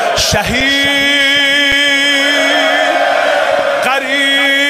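Underrun with held sample occurs at 0.60 s, 1.72 s and 3.59 s. Each time the output buffer ran dry, and the converter froze on its last value until data arrived again, so the waveform goes flat. The first two gaps last 5.8 ms, which is 256 samples. The third is shorter, under 2 ms. Live audio was lost during each gap, roughly 5 ms in the first two and 2 ms in the third.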